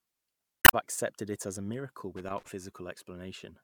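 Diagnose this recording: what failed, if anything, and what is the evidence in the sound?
Two separate things went wrong. The first is in the codec or storage stage: damaged data in a compressed stream. From 0.62 to 0.74 s, just before "accepted it as a", there's a short glitch where the decoder hits corrupted frames, can't make sense of them, and hunts for the next valid frame header to resync. That glitch is it regaining its footing.

The second is down in the analogue wiring: loose connector crackle. Right after "it as a miracle", from 2.16 to 2.48 s, you get an irregular scratchy crackle lasting about a third of a second. That's a contact making and breaking as something shifts, chopping the signal on and off in quick, uneven bursts. A reseat or a cleaned or replaced cable or jack should sort it.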